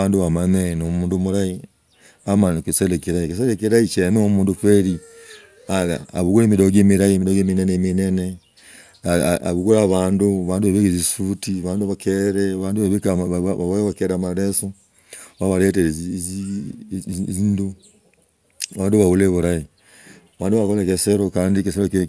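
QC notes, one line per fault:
No faults heard anywhere in the speech; nothing to log.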